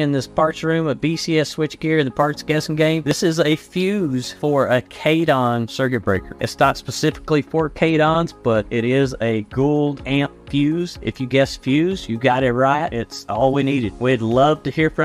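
From 2.16 s to 7.30 s the converter's sample clock wanders by a few microseconds, causing sample clock jitter: each sample lands slightly early or late, so errors track steep waveform slopes, adding a hiss roughly 30 dB below the sound that swells with loud, bright passages and disappears in silence.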